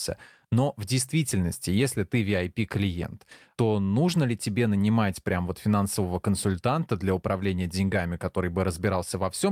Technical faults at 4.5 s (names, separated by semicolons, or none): none